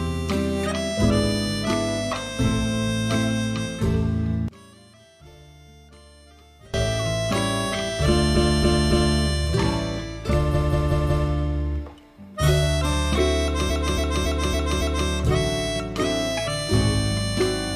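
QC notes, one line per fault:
4.48–6.74 s, one channel inverted: In mono the sound drops by about 26 dB and nearly disappears, leaving a faint remnant until it returns at 6.74 s. This is most likely one stereo channel with reversed polarity. Summing the two channels cancels the material they share, so only the small difference between them survives.
8.32–9.15 s, 10.50–11.24 s and 13.66–15.05 s, repeated frames: Each span is a stutter in which the same short slice loops. At 8.32 s a 0.28 s block plays three extra times. At 10.50 s a 0.19 s block plays four extra times. At 13.66 s a 0.28 s block plays five extra times. Runs of compressed frames were delivered more than once and decoded again, lengthening the audio by 0.84 s, 0.74 s and 1.39 s respectively.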